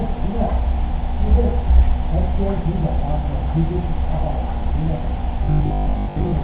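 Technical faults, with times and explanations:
5.44–6.42 s, robotic sound from repeated short buffers: the sound becomes a rigid, metallic 50 Hz buzz that only loosely follows the audio. The likely cause is late-arriving data, with a 20 ms stretch looped to fill gaps, skipping most of the real audio.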